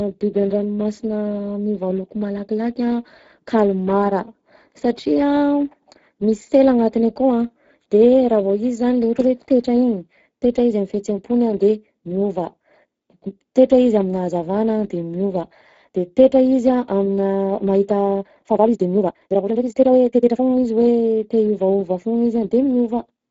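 From start to finish the speech carries the sound of the Speex codec, and the damage is plainly audible: a hoarse, grainy edge on every syllable where the codec hasn't enough bits to model the excitation properly, with the top end reduced to a hissy, noise-like fill. That degree of roughness points to a fairly low quality setting, something in the region of 10 kbps.

Then, right after "aminà mahita", from about 18.00 s to 20.46 s, you get a time-stretched section. The pace suddenly jumps to roughly 1.76 times normal while the pitch stays put, so it sounds rushed. That's most likely software squeezing the passage to fit a length by dropping short slices rather than resampling.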